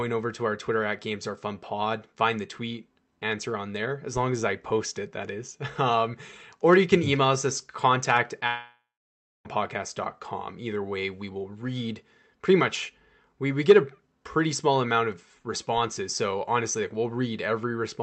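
From 8.47 s to 9.47 s the speech breaks off in what is likely a long network dropout: about a second of audio never arrives. The last sound is stretched into a fading buzzy hiss, then roughly 0.6 s of near silence follows before speech resumes with the lost part simply gone. On a spectrogram the harmonics smear into a decaying blur and then a blank band. The waveform shows a shrinking envelope, then a flat line. The Opus call path's band limit near 8 kHz stays visible throughout.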